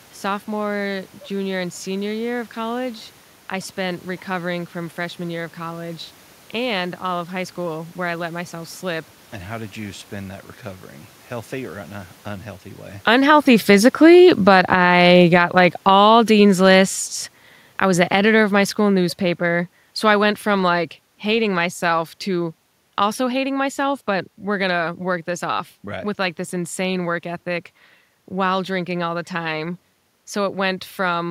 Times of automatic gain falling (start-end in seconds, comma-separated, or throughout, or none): 12.92-23.97